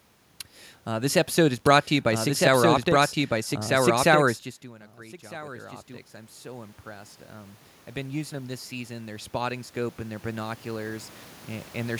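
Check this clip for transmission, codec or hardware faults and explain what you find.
One fault is present: automatic gain rising, at 4.61–5.81 s (about 5 dB) and 6.42–11.15 s (about 12 dB). Around 4.5 s the talker moves away and the input falls by about 21 dB. The gain control then ramps up to compensate, so voice and room noise swell together.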